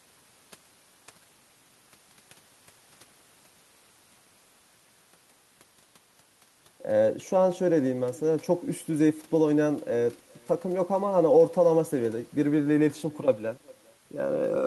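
From start to finish the speech carries an echo with no canceller: the far end's loudspeaker feeds back into its microphone and nothing strips it out, so every phrase returns roughly 0.4 s later, about 26 dB down and thinner. On a spectrogram each syllable's energy reappears as a faint ghost shifted right by that gap. In the waveform, small delayed bumps trail each burst and fill the pauses.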